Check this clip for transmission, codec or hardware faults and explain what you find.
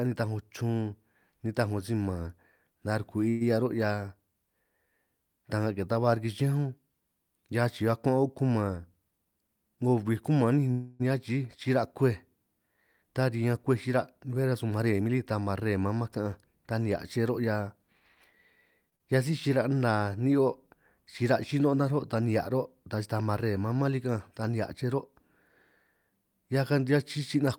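The speech shows five kinds of network-timing fault, all from the receiver's jitter buffer handling uneven packet delivery.

Call audio freeze, 3.29 to 3.43 s and 10.72 to 11.02 s. The likely cause is packets held up in transit so the jitter buffer ran dry. The receiver carried the last sound on as a fading buzz or hiss for 113 ms and then 282 ms, with no true silence, and resumed where it stopped. Nothing is lost, but gaps are inserted into the speech.

Jitter buffer speed-up, 9.11 to 9.85 s and 13.87 to 18.87 s. With more audio queued than the buffer's target, the receiver trimmed short pitch-period slices repeatedly to shed delay: roughly 100 ms in the first stretch, playing at 115% speed, and roughly 200 ms across the second, at 104%. Pitch stays put, so the first passage sounds noticeably rushed and the second not noticeably hurried.

Short stall from a late packet, 18.90 to 18.94 s. 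One packet missed its slot, so the receiver stretched the current sound by 23 ms until it arrived, then continued seamlessly. The result is a sound held a touch too long, with a faint buzz or dip, and nothing missing.

Skip ahead, 18.96 to 19.01 s. Just after that stall, a stretch of roughly 100 ms was discarded because later audio was already waiting. Playback jumps forward, with a brief 32 ms fill bridging the join. About 100 ms of speech vanishes, and the speech on either side is spliced almost directly.

Jitter buffer slow-down, 19.48 to 20.10 s. Running low after the skip, the receiver rebuilt its reserve by repeating single pitch periods, adding 84 ms and playing at 88% speed. Pitch is unchanged, so sounds come out drawn-out over that half-second.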